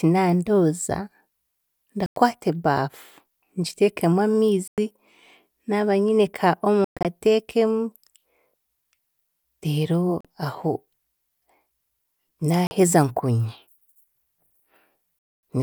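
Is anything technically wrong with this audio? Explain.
Yes. The speech cuts to silence six times: 2.06–2.17 s and 4.68–4.78 s (about 100 ms each), 6.84–7.05 s (broken gaps totalling 160 ms), 10.21–10.25 s and 12.67–12.71 s (40 ms each), and 15.19–15.43 s (240 ms). Each time it resumes further along, as though it kept playing through the hole. These are likely Bluetooth dropouts: audio packets reached the headphones too late and were discarded, leaving silence until timely packets arrived.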